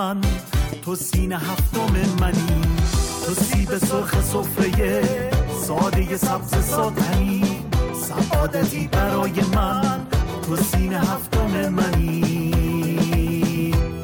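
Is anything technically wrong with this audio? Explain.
No, nothing in the signal points to a technical fault.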